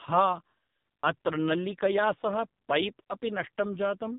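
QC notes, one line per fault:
throughout, AMR narrowband mobile codec: the speech went through the AMR-NB mobile speech codec at a low rate, which fits about 5.9 kbps, so the voice comes out buzzy and synthetic with heavy codec damage, and nothing survives above about 3.8 kHz, leaving it thin and muffled.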